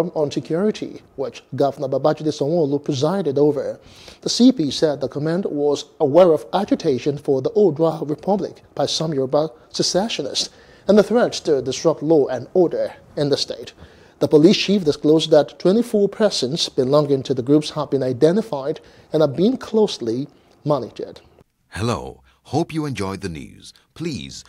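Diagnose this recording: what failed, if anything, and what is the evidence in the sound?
Nothing in the recording points to a failure at any stage of the chain. No stage, from wiring to playback, leaves a mark on the sound.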